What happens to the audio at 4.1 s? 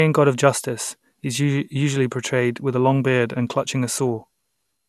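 At 4.1 s, as throughout, generation loss makes the speech swirly, hollow and smeared, with nothing above 12.6 kHz. That is worse than a single 128 kbit/s MP2 pass would leave, likely from around seven re-encodes piling up quantisation damage.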